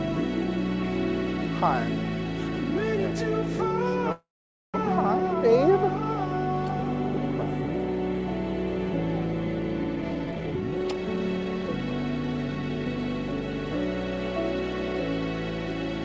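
At 4.12 to 4.76 s a call audio freeze stalls the sound for about 0.62 s: a brief fading buzz, then roughly 0.49 s of silence. The likely cause is delayed packets emptying the jitter buffer. The audio resumes where it stopped with nothing lost. From 9.96 to 12.86 s a jitter buffer speed-up trims about 0.7 s of pitch-period slices, so the sound runs at 120% speed with unchanged pitch and feels hurried. Throughout, the G.722 call path leaves nothing above 8 kHz.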